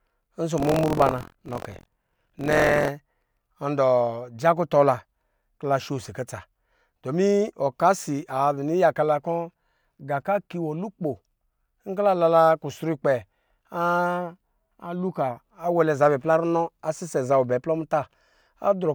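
A robotic, rattling buzz at about 43 Hz rides on the speech from 0.56 to 2.88 s. That is buffer tearing, which fits a 1024-sample buffer. Writer and reader cross mid-period, so a small slice of each buffer replays audio from roughly 70 ms earlier, hard-joined at both edges.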